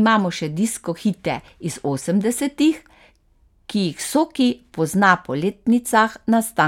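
Nothing in this recording trips any alarms, since there's no fault to point to anywhere along its run.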